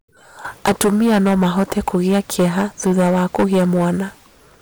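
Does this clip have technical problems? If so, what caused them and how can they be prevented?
Yes, hard clipping runs throughout: the speech hits the ceiling about 17 dB too hot, so a small but steady share of peaks get squared off into harsh fuzz. Next time, drop the input gain until peaks sit comfortably below full scale.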